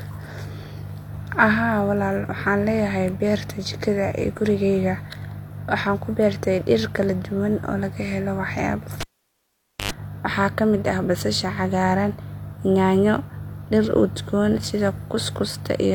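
Dropped samples at 6.84 s and 14.88 s in this speech recording produce single sharp clicks, likely from a tiny fraction of a millisecond missing so the waveform jumps abruptly. A cable pulled and plugged in from 9.01 to 9.92 s gives a pop, about 0.86 s of near silence, then roughly 0.1 s of 50 Hz mains buzz as the tip makes contact, and a second pop when the sound returns.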